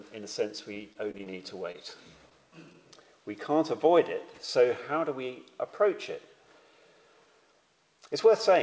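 From 0.74 to 1.38 s the connection drops packets over and over: five separate gaps, the longest 28 ms, with the receiver patching each by extending the preceding sound. About 98 ms of that span is invented fill, roughly 18% of it, and 80 ms of real audio never arrives. This is repeated packet loss, heard as a choppy, robotic stretch where patched fragments alternate with genuine audio and small pieces simply go missing.

At 1.72 to 1.76 s a single packet arrives late, so the jitter buffer runs dry and the receiver holds the last sound for 23 ms until the packet shows up, then resumes exactly where it left off. This short stall from a late packet loses nothing, but the playout delay grows by 23 ms, and the moment comes across as one sound lingering a touch too long with a faint buzzy sag.

From 2.29 to 2.33 s a short concealed packet loss occurs. About 20 ms of audio fails to reach the decoder in time, and the receiver covers the hole with 13 ms of synthesised continuation before blending back into real signal. 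The result is a brief smear or wobble where a short portion of sound is missing rather than merely held.

Throughout, the call path has no content above 8 kHz, which fits a G.722 wideband codec.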